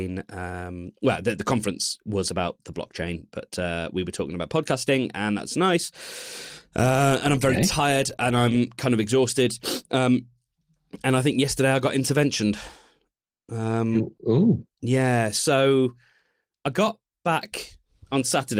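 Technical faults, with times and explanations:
Nothing here counts as a technical fault; the speech simply runs through Opus voice compression at 24 kbps in its hybrid, fullband setting, which works as intended.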